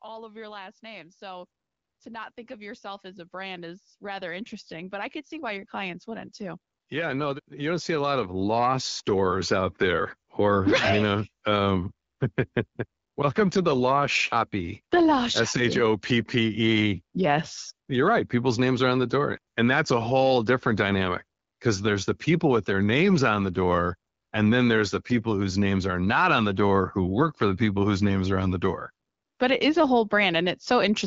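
From 0.05 s to 9.86 s the level climbs steadily as automatic gain rising takes hold: the gain control judged the input too quiet and kept pushing its gain up, by about 20 dB in total, so the speech and the background noise swell together. On a waveform the envelope widens like a slow ramp, and a spectrogram shows every band, including the noise floor between phrases, brightening in step. The AMR wideband (HD Voice) coding leaves only light damage and the speech stays clear, consistent with a rate around 12.65 kbit/s.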